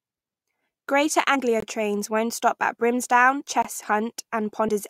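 The decoder of this speech recording drops whole compressed frames three times, so the compressed frames skipped make the audio jump forward. At 1.34 s, just before "trains won't stop at", about four frames, roughly a tenth of a second, vanish. A single frame of around 20 ms goes at 3.40 to 3.42 s, and about three frames, roughly 70 ms, go at 4.68 s. Separately, the audio arrives in 2-second chunks with a 21.33 ms gap between chunks, leaving silent holes at 1.60 to 1.62 s, again just before "trains won't stop at", and at 3.62 to 3.65 s. Nothing is lost there, but the flow breaks at each join.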